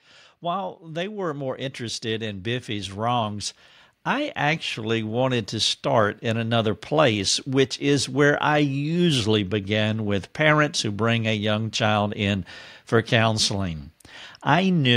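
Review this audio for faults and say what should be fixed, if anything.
Automatic gain rising shows up twice in this speech clip. From 0.48 to 3.52 s the level climbs by about 7 dB, and from 4.04 to 6.52 s it climbs again by about 4 dB, just before "place which is where". Each time the gain control judged the input too quiet and turned itself up slowly, so the voice and the background noise swell together over a few seconds. To prevent it, disable automatic gain control and set a fixed input level with enough headroom.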